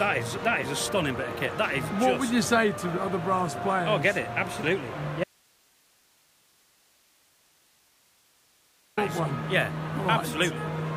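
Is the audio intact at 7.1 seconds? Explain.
No, 7.1 s sits inside an audio dropout to a faint residue from 5.24 to 8.97 s. The signal likely dropped while the path stayed live, leaving only faint hiss.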